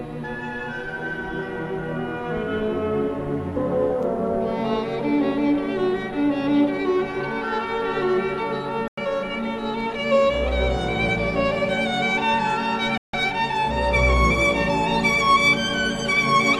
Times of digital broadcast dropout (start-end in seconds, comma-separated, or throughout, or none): 8.88-8.98, 12.97-13.14